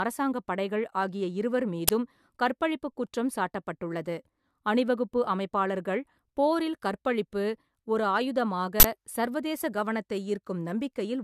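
At 1.88 s and 8.80–8.84 s, an uninitialised buffer plays stale memory as a loud crack and a burst of digital noise, fitting 512- and 2048-sample blocks. They show as loud blocks in the waveform and broadband spectrogram stripes.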